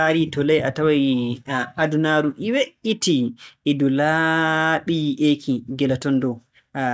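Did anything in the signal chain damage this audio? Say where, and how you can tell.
No, nothing in the signal chain audibly damaged this speech recording; the signal holds steady, continuous and intact all the way through.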